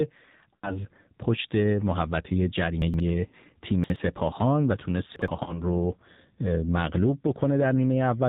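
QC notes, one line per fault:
throughout: AMR narrowband mobile codec. Everything above 4 kHz is gone, and the speech has that buzzy, synthetic edge of a vocal tract model driven by sparse pulses. The damage is plainly audible, which fits a low AMR-NB mode around 7.4 kbps.
0.56–0.81 s, 3.28–3.34 s, 5.44–5.61 s: lost AMR speech frames, about 60 ms, 40 ms and 20 ms missing. The decoder keeps replaying the last good pitch and vocal tract settings at falling gain, so each spot smears and dips before the speech comes back rough.
2.82–3.00 s, 3.84–3.96 s, 5.16–5.28 s: chunks out of order. A 60 ms chunk lands late, two chunks late in the first case and one in the others, so a jumbled moment plays with hard joins. Nothing is missing, only misordered.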